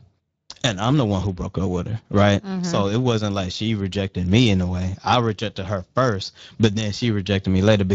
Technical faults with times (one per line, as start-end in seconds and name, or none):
0.00-7.95 Speex codec